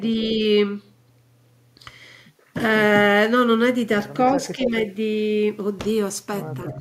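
From 4.42 to 4.71 s there's an echo leak: a copy of the speech comes back about 273 ms late and only a few dB quieter. It's likely a speakerphone on the far end whose echo canceller let part of its own playback slip through.

Overlapping that, from 4.55 to 4.73 s, the speech is suppressed in double talk. The level dips by roughly 10 dB for about a tenth of a second. A shorter, shallower dip of around 5 dB follows at 6.73 to 6.77 s. Both are likely the canceller turning everything down while both sides talk at once.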